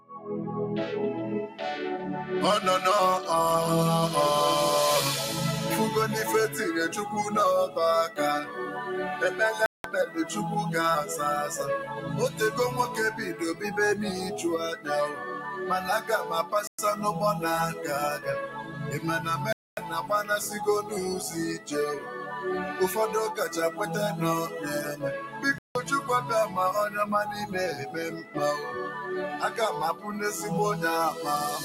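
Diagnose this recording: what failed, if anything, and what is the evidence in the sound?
Call processing: a noise suppressor built for speech is left active on this sound. Sustained material and decays are repeatedly pulled down and released, with a level swing of around 10 dB, while attacks pass. This is continuous gain riding, not dropouts, because the sound keeps going underneath.

Call processing: sound cut by the noise suppressor appears in distinct stretches at 0.00–0.28, 7.68–8.58, 11.98–13.63, 14.76–16.53, 17.76–22.31, 23.71–28.36 and 29.94–30.10 s. Held or fading parts sink by about 9 to 12 dB, deepest at the start. The sound dips but still continues underneath, unlike a stall.

Playback: four hard gaps of silence occur at 9.66 s (183 ms), 16.67 s (113 ms), 19.53 s (247 ms) and 25.58 s (169 ms). These are likely Bluetooth stalls, where the headphone buffer ran dry while packets were resent. 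They are full silences rather than gain dips, and the sound resumes afterwards.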